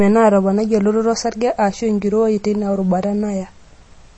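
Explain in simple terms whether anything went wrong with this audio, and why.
The speech sounds watery and swirly from start to finish, with nothing above about 8.3 kHz, and s sounds take on metallic chirps. That points to likely MP3 compression: unlike a simply muffled recording, the remaining detail flickers and warbles rather than just sounding dull.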